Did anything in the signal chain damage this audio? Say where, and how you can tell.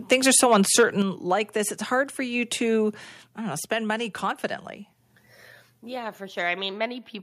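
Yes. Between 0.11 and 0.84 s, right before "like this it's", the loudest moments come out distorted with flattened tops. That's microphone overload at the converter, likely from input gain set too high, running about 4 dB past its limit and clipping around 2% of samples.

Then at 1.02 s, still before "like this it's", the speech and the background drop together by about 5 dB in a single step. That's the microphone volume stepped down, likely the call processing reacting to those clipped peaks and cutting the device's input level.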